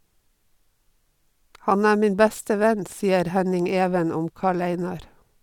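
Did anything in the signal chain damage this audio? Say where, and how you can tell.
No, nothing in the signal chain damaged this speech.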